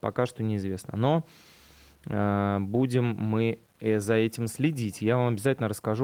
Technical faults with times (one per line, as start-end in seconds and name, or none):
0.00-6.04 low bit depth without dither